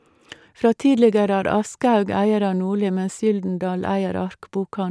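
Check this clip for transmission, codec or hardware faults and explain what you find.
Nothing wrong turns up here; the speech comes through steady and intact, with no dropouts, glitches or damage to point to.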